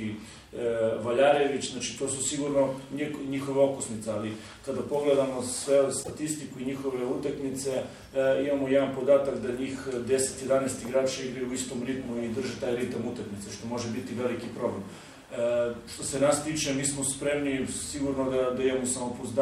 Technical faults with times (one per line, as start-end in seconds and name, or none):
6.00-6.11 damaged data in a compressed stream